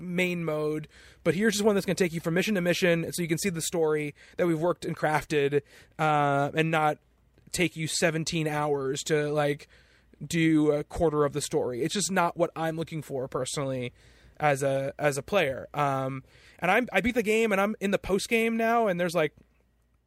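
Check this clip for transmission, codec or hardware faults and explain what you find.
No faults can be heard anywhere in the speech. There is nothing to point to at any moment in the audio.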